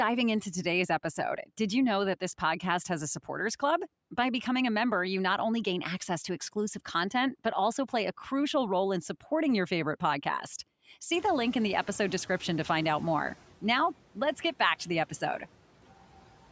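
Speech, passed through call microphone processing that leaves nothing above 8 kHz. Just after "supporting your favorite podcast", the room noise jumps by about 22 dB around 11 s. From 11.12 to 13.35 s, the noise suppressor is catching up. Its noise estimate lags the sudden rise, so the noise comes through under-reduced at first. Over about 2.2 s it sinks by about 9 dB as the estimate adapts.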